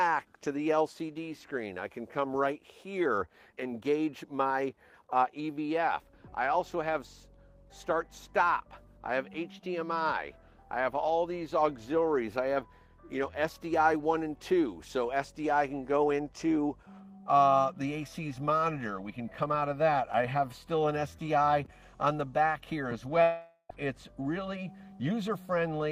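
From 23.22 s to 23.71 s the sound breaks off. The last moment is stretched into a fading, buzzy hiss, followed by 60 ms of silence, and playback resumes with 480 ms of material lost, likely a long network dropout concealed by the receiver.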